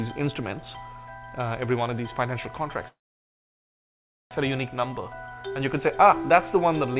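At 2.88 s the audio breaks off into a brief fading tail, then near-silence until 4.33 s, when it resumes exactly where it stopped, about 1.4 s late, with nothing lost. This is likely a call audio freeze: packets stalled in transit, the jitter buffer emptied, and the receiver padded the wait. Throughout, the sound is narrowband, with nothing above 4 kHz, which fits a 64 kbps G.711 mu-law call path.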